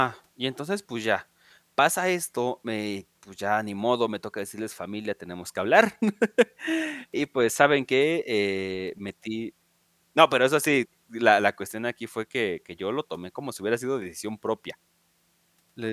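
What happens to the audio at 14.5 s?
Nothing goes wrong at 14.5 s; the speech there plays through intact, with no dropout, click or distortion.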